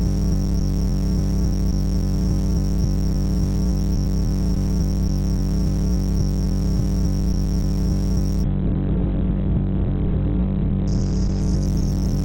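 A call bitrate drop begins at 8.47 s and lasts to the end: the encoder's rate falls from 48 to 8 kbps, bottoming out for 2.2 s, and its bandwidth shrinks from 20 kHz to 4 kHz, so the sound turns coarse, watery and muffled.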